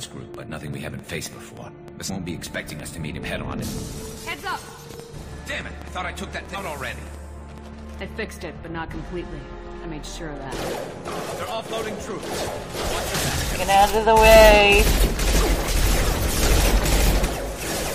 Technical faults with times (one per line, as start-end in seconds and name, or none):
0.03-7.59 train of clicks
2.08 damaged data in a compressed stream
6.54 damaged data in a compressed stream
17.24-17.26 damaged data in a compressed stream